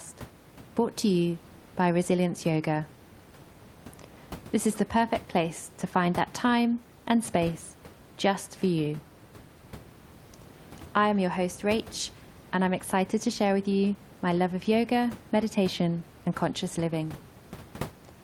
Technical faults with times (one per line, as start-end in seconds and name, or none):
none